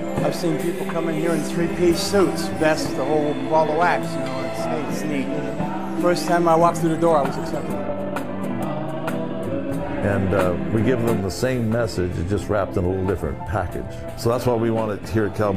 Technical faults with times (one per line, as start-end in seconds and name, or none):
6.47-9.13 time-stretched section